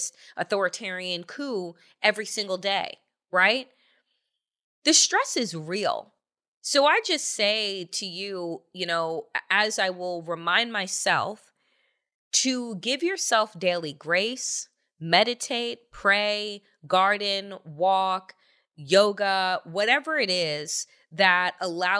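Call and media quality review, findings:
No call or media quality findings to report for this review.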